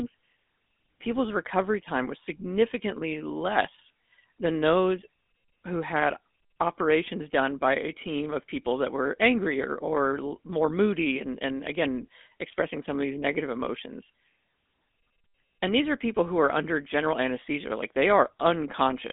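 GSM full-rate codec damage runs through the whole clip, from start to finish. The speech has been squeezed through a vocal-tract model driven by a sparse train of regular pulses, so fine detail in the excitation is thrown away and the voice picks up a plainly audible buzzy, gravelly grain, which fits the 13 kbps full-rate coder. The band is telephone-narrow, roughly 200 Hz to 3.6 kHz, with nothing above 3.8 kHz, leaving the speech dull and boxy.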